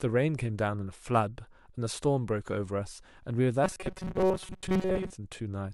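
From 3.64 s to 5.12 s the speech turns into a rigid, metallic buzz pitched at 188 Hz, still loosely tracking the syllables. This is robotic sound from repeated short buffers, most likely caused by audio arriving too slowly for playback. The software fills the gaps by looping the last fragment, and a 188 Hz buzz points to a loop of about 5.3 ms. Around seven tenths of that stretch is repeated material, with the real audio skipped.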